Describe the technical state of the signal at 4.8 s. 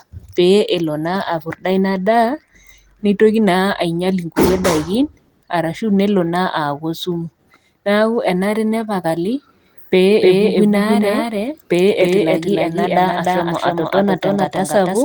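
At 4.8 s the audio is intact, with no dropout, click, distortion or other fault in the signal.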